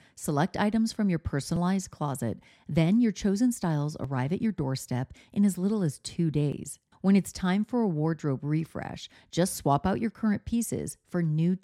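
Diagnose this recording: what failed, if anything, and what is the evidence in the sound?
Audio missing between chunks at 1.56, 4.04, 6.52 and 9.00 s: skips of about 20 ms every 2.5 s, likely lost at buffer chunk boundaries.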